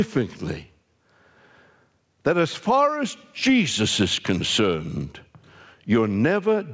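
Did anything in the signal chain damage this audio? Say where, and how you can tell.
Yes. Across the whole clip the speech sounds squashed, with loud and soft syllables sitting unnaturally close in level, and the gain swings by around 15 dB. That is gain pumping, and the likely cause is an input gain set far too high for the microphone, with a fast limiter or compressor in the capture or call processing stage pulling the level down on every peak and releasing it in the gaps.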